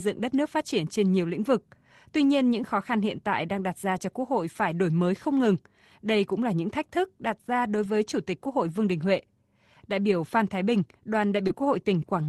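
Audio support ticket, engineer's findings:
Lost packet rebuilt from error correction, 7.83–7.85 s, right after "thức đặt ra đối". About 20 ms of rough, noisier speech, no gap. Opus decoder played the low-bitrate copy carried in the next packet. One packet lost.

Second lost packet rebuilt from error correction, 11.49–11.51 s. Same grainy 20 ms patch. Same in-band FEC recovery.

Short concealed packet loss, 11.47–11.51 s. Brief smear and wobble, about 16 ms filled out of 20 ms missing. Packet did not reach the decoder in time. Decoder extended the preceding sound, then cross-faded into the FEC-rebuilt frame. Opus call path, top cut-off at 12 kHz, coding noise fits roughly 24 kbps.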